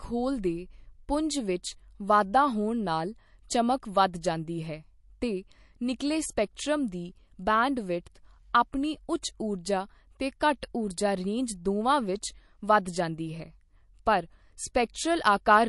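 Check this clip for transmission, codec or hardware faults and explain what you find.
One codec fault runs through the whole clip: MP3 compression, likely from a low-bitrate encode, with damage that fits roughly 48 kbps. Short of bits, the encoder cuts the treble and drops weak frequency lines frame to frame, so the speech sounds watery, s sounds chirp metallically, and attacks smear.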